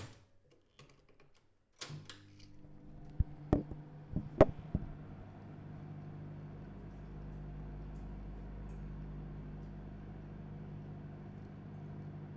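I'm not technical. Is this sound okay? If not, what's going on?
Yes, no technical faults are audible anywhere in this sound.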